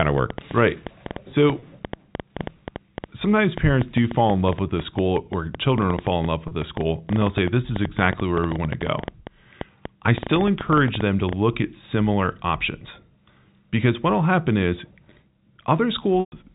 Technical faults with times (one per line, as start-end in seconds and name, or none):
0.00-11.34 train of clicks
1.59-1.62 packet loss with pitch repetition
6.48-6.51 packet loss with pitch repetition
16.20-16.32 packet loss with pitch repetition